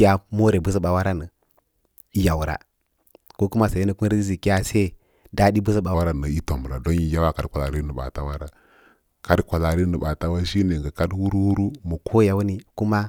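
Speech, with a section at the wrong speed from 5.94 to 12.12 s. There the audio runs at 0.852 times normal speed. Pitch drops about three semitones and delivery slows. The likely cause is playback or editing against a mismatched clock.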